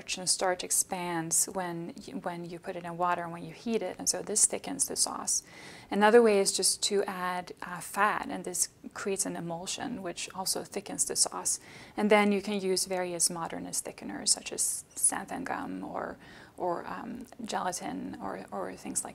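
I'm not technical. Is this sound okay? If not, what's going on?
Yes, nothing in this recording calls for attention.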